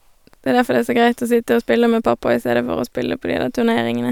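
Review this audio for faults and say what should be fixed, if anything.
Nothing here needs fixing, because the speech signal shows no audible technical defects anywhere in the recording.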